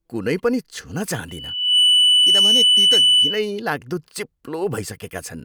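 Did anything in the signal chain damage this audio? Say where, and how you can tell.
Yes. Loudspeaker feedback squeal from 1.28 to 3.58 s: a steady 3 kHz tone swells over roughly half a second to about 10 dB above the speech. This is the acoustic stage. The microphone picked up its own loudspeaker, and loop gain above one at 3 kHz let that tone feed on itself.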